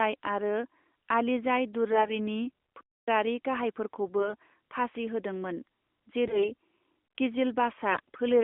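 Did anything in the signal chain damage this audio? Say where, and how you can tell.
Yes. Network: AMR bit errors at 1.92–2.11 s, 6.26–6.52 s and 7.92–8.15 s make the speech hoarse and gargly, as flipped frame bits misplace excitation pulses and skew gain.

Playback: a playback stall from 2.81 to 3.08 s cuts the sound for about 267 ms mid-flow, likely a starved or blocked player buffer, before it resumes.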